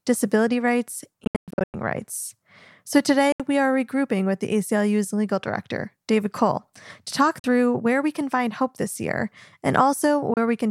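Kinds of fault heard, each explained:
Bluetooth dropout: the speech cuts to silence, worst from 1.24 to 1.74 s where 377 ms of gaps are scattered, then in short holes near 3.32, 7.39 and 10.34 s, resuming as though it had played on. Likely cause: packets reaching the headphones too late.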